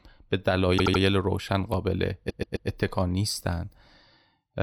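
A speech clip with two kinds of playback fault. Repeated frames occur twice. From 0.77 to 1.01 s, a 78.4 ms stretch plays three extra times, adding 235 ms. From 2.29 to 2.68 s, a 130.6 ms stretch also plays three extra times, adding 392 ms. Each is heard as a stutter. A run of compressed frames was written or sent more than once, so the decoder played it again. Together they lengthen the audio by about 627 ms. A repeated buffer occurs at 1.74 s. A 1.45 ms piece sounds one extra time with a hard join, which fits a 64-sample buffer. Fresh audio did not reach the device in time, so it replayed the last buffer. With a buffer this small, the repeat is heard as a click or brief buzz.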